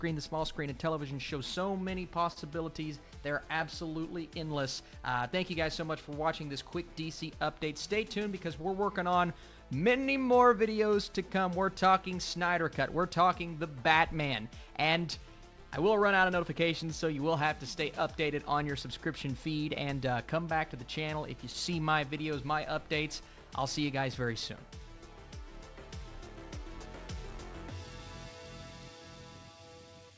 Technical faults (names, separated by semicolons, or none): short stall from a late packet; jitter buffer speed-up